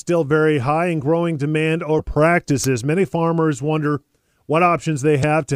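At 1.98 to 2.01 s, just after "high and growing demand", damaged data in the compressed stream makes the decoder misread its frames and lose sync while it hunts for the next valid header, leaving a brief glitch. At 2.64 s, just before "many farmers", a sharp snap or tight cluster of clicks sits on top of the speech, likely an electrical switching spike picked up by the audio line from a nearby switch or discharge. A second instance of damaged compressed data follows at 5.20 to 5.25 s, a glitch about twice as long as the first as the decoder again drops sync.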